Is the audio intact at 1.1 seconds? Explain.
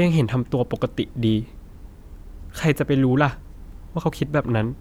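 Yes, the speech at 1.1 seconds is intact, with no dropout, click, distortion or other fault at that moment.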